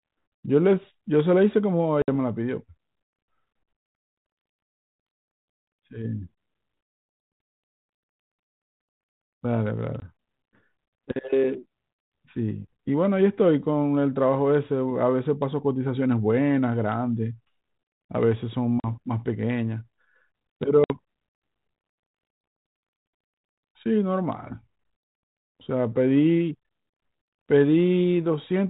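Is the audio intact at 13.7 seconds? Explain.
Yes, the audio is intact at 13.7 seconds, with no fault at that moment.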